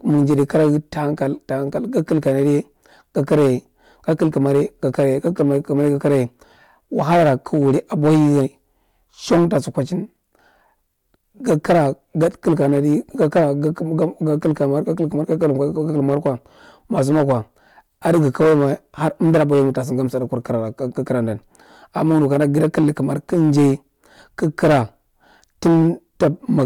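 Speech with hard clipping throughout the recording. The signal was driven about 12 dB past what one stage in the chain could pass, so peaks are sliced flat, roughly one sample in twenty. The squared tops add high harmonics, heard as harsh fuzz on louder syllables.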